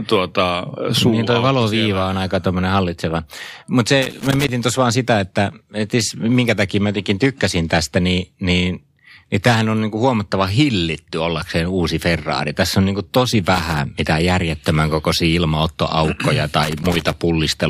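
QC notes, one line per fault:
4.02–4.49 s, loose connector crackle: irregular scratchy burst just before "tuossa vaan sitä että", where a worn or dirty contact rapidly made and broke, chopping the signal.
13.54–13.79 s, loose connector crackle: short ragged crackle between "on niin kuin tosi" and "mitään järjettömän kokoisia ilmaottoaukkoja". Its uneven, unpatterned spacing separates it from regular digital clicks.
16.63–17.17 s, loose connector crackle: longest burst, after "mitään järjettömän kokoisia ilmaottoaukkoja". Erratic scratching comes from the intermittent contact rather than from clipping or dropout.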